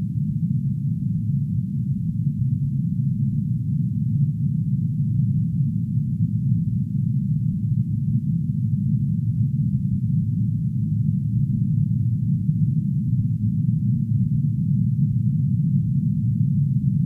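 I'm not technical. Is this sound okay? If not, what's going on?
Yes, nothing in this recording needs fixing: there are no dropouts, glitches or distortion to report.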